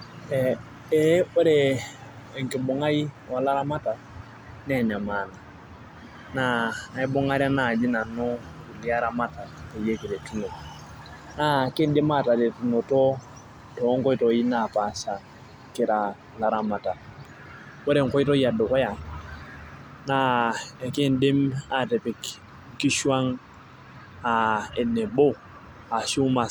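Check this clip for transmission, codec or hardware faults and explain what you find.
Nothing to report: the speech shows no audible fault anywhere.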